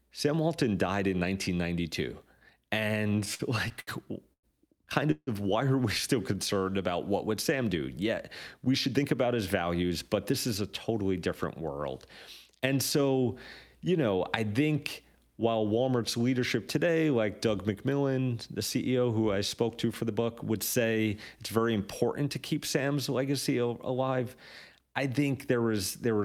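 Between 3.07 and 4.45 s the speech stutters in repeated stalls. The jitter buffer ran dry seven times, and each gap was bridged by stretching the last sound, 260 ms in all, with the longest about 102 ms. On a spectrogram these show as short horizontal smears of frozen harmonics interrupting the speech.

From 5.11 to 5.29 s, just before "of why are we", comes a call audio freeze. The last sound is held for 158 ms as a buzz or hiss that fades, ending in about 50 ms of silence, and the speech then resumes where it stopped. This was likely caused by packets held up in transit. It appears as a flat, decaying band followed by a blank strip.

At 6.32 to 6.60 s a jitter buffer slow-down repeats pitch periods, adding 41 ms, so the speech plays at 89% speed with unchanged pitch. The waveform shows the same cycles duplicated, and the sounds are drawn out.

Jitter buffer speed-up trims pitch periods in three places. 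From 8.67 to 11.05 s, ending before "different world", the speech runs at 107% with roughly a fifth of a second removed. From 19.89 to 20.17 s, between "who I spoke to" and "would say it's very", it runs at 110% with around 40 ms cut. From 24.03 to 24.95 s it runs at 104% with about 50 ms cut. The first two passages sound hurried at normal pitch, and the spectrogram shows compressed syllables with tiny seams.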